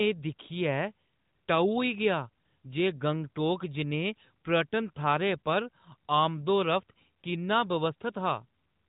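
No faults to report; the speech runs over an AMR narrowband mobile link with nothing above about 3.8 kHz, as that path normally delivers.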